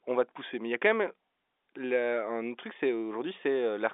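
The speech arrives over an ordinary telephone channel in G.711 A-law coding at 64 kbps, with the band running from 300 Hz to 3.6 kHz and nothing above 3.8 kHz, and no technical fault can be heard anywhere in it.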